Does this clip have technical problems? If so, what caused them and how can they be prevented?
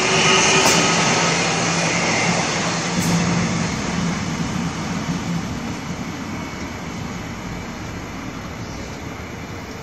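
No, nothing technical stands out in this one, so there's nothing here that needs fixing or preventing.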